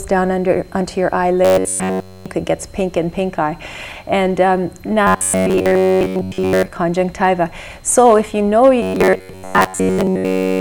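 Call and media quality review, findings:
Robotic sound from repeated short buffers, 1.45–2.26 s, 5.07–6.70 s (mostly), 8.82–10.6 s. Rigid metallic buzz at 93.8 Hz. Likely playout buffer underrun, with the last ~10.7 ms replayed in place of missing audio.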